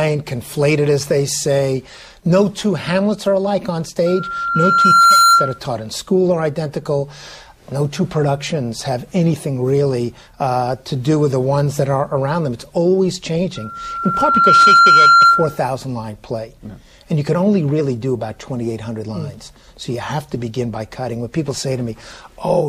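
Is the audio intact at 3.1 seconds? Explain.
Yes, at 3.1 seconds the audio runs cleanly, with no audible dropout, click, distortion or other fault at that moment.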